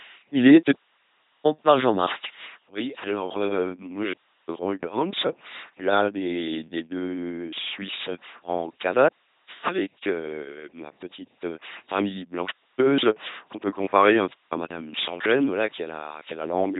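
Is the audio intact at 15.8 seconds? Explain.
No. At 15.8 s the speech carries the LPC-10 vocoder sound present across the whole clip: a buzzing, mechanical robot voice, the heavy damage expected of a 2.4 kbit/s coder. Each moment is rebuilt from a short all-pole filter fed by either a pulse train or noise, so wrong voicing decisions surface as stray buzz or hiss. A spectrogram shows smeared formants, rigid harmonic stripes, and nothing above 3.8 kHz.

From 15.48 s to 16.79 s, grainy distortion is also audible. It tracks the sound, turning quiet passages gritty and making the softest moments sputter or drop out. The likely cause is low bit depth without dither, consistent with truncation to 8 bits, which leaves an error about 30 dB below the signal. The waveform shows visible stair-stepping at low levels, and the spectrogram shows a raised, signal-dependent noise floor.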